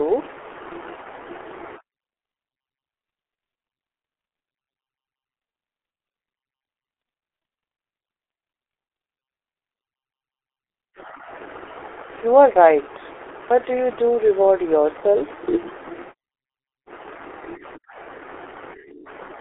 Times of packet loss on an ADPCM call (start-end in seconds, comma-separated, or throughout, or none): none